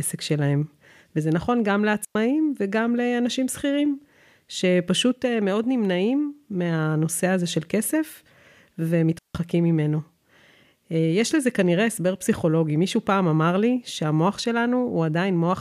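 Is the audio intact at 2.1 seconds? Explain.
No. From 2.05 to 2.15 s the speech drops into a clean hole of near silence lasting about 105 ms, with no noise burst on either side. This is a digital wireless dropout: the receiver lost too much data and muted with a very short fade.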